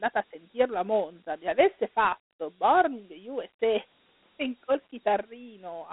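Dialogic VOX ADPCM runs from start to finish. The speech is coded as 4-bit adaptive differences, which fits roughly 32 kbps, and is squeezed into a phone band of 200 Hz to 3.4 kHz with nothing above 3.8 kHz. A gritty hiss trails the speech.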